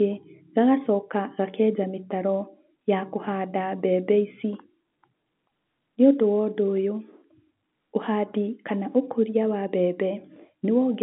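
No faults in the speech; the G.711 telephone coding holds the line band to about 150 Hz to 3.7 kHz, with at most faint codec noise riding under the signal.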